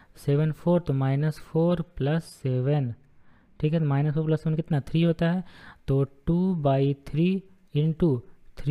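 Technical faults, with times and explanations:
2.20–4.67 s, de-emphasis applied wrongly: for this stretch the top end just sags away, so the sound goes dull and muffled, like someone threw a blanket over it. What's happening is a treble-cut curve meant to undo pre-emphasis got applied where there was nothing to undo, or applied a second time, so it rolls the highs off smoothly, landing about 8 dB down at 10 kHz relative to 1 kHz, then everything snaps back once it ends.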